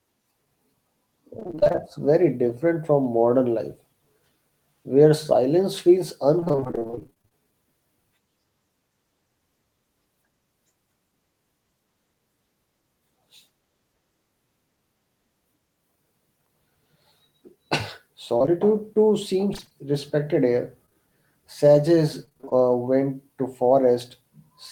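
From 1.39 to 1.80 s, just before "very different from modern", repeated packet loss (robotic sound) chops the speech. Gaps of up to about 26 ms are patched by extending the last sound, leaving a choppy, stuttering texture with pieces missing. The same fault returns at 6.40 to 7.33 s, at 18.38 to 19.74 s (where the gaps are sparser) and at 22.25 to 22.53 s. On a spectrogram these stretches show rows of short, smeared, unnaturally steady blocks with abrupt edges.

Right after "respected here", around 20.86 to 20.95 s, short concealed packet loss leaves two overlapping holes of about 20 ms each. The receiver fills them by continuing the preceding sound and blends back into the real audio, so the loss is heard as a quick smear or wobble. The waveform shows a tiny, overly smooth patch.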